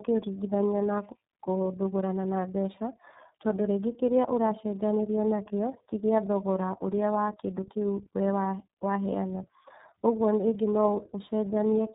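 Throughout the speech, tandem speech coding: the signal is decoded and re-encoded by two low-rate speech codecs in a row, the second compressing the first's errors. Speech sounds rough, muffled and warbly, with nothing above 3.8 kHz, which fits G.729A followed by iLBC.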